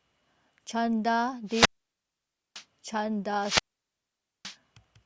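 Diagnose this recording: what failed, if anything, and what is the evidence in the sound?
The wireless RF link faded and the receiver's squelch muted it, a wireless microphone squelch dropout. At 1.46–2.64 s and 3.39–4.56 s, hiss rises, then 0.91 s and 0.87 s of near silence follow.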